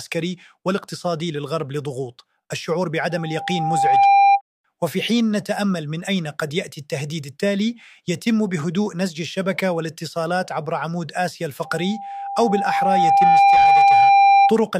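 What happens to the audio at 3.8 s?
At 3.8 s the audio is in the middle of a loudspeaker feedback squeal that runs from 3.10 to 4.41 s. A microphone is picking up the loudspeaker it drives, and at 795 Hz the loop gain has climbed past unity, so that one frequency keeps reinforcing itself. It swells over roughly a second into a steady, piercing tone, ending up around 10 dB above the surrounding sound before the loop breaks at 4.41 s.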